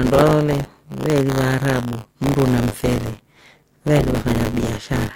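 The writing side of the audio ring buffer has drifted against the hardware read, so each period holds a small slice, around a sixth, of sound left over from about 20 ms before. This is buffer tearing, heard throughout as a 100 Hz robotic buzz riding on the speech.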